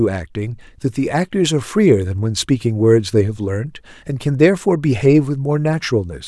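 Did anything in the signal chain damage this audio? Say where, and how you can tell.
No, nothing stood out on listening that would point to damage at any stage of the signal chain.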